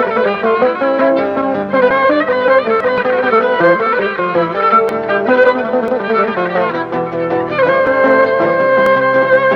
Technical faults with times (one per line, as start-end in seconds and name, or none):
1.91 overlap between stream segments
4.89 overlap between stream segments
5.88 overlap between stream segments
7.87 overlap between stream segments
8.86 overlap between stream segments